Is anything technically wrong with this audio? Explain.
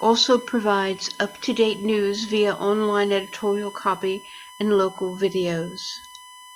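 Yes, there is USB whine throughout the speech: a steady 1 kHz tone about 20 dB below the voice. The bus's 1 ms frame current leaks into power or ground. Unlike 50 or 60 Hz mains hum, its pitch sits exactly at 1 kHz.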